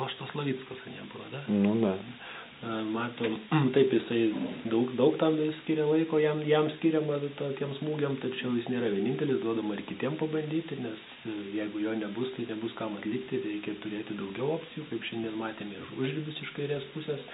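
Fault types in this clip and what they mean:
No technical faults can be heard in this audio.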